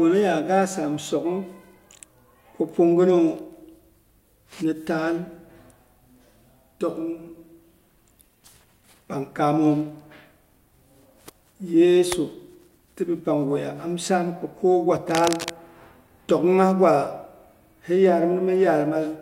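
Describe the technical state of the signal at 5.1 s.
At 5.1 s the speech signal is intact, with no audible fault at that moment.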